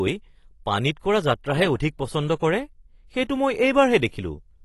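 From start to finish the speech is dull, with nothing above 12 kHz, and sibilants and held vowels carry a warbling, fizzy smear. This is likely AAC compression at a low bitrate, about 32 kbps. A plain low-pass filter would dull the top without that swirling texture.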